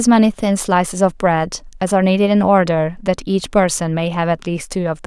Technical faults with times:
none

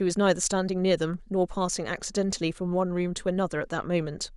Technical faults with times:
none

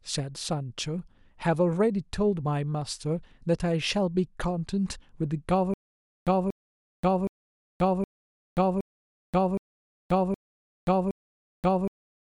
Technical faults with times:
5.74-12.21 stutter with silent gaps

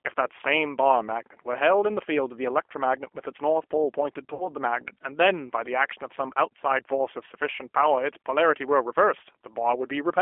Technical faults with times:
0.00-10.21 G.729 codec
4.34-4.48 VoIP packet loss concealed by the speech codec

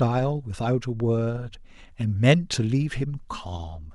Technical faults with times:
1.53 compressed frames skipped

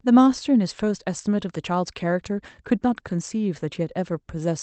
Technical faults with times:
none

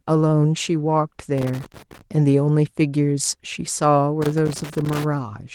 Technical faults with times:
1.38-2.01 loose connector crackle
4.22-5.04 loose connector crackle

